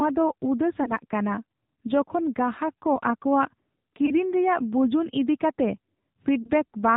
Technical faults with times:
0.00-6.96 AMR narrowband mobile codec
0.84-0.93 lost AMR speech frames
4.06-4.11 lost AMR speech frames
6.42-6.50 lost AMR speech frames

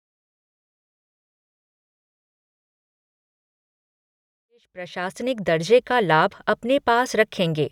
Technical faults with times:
none

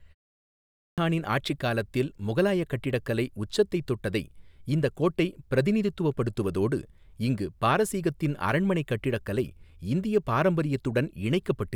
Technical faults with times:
0.57-0.98 clipped start after a pause

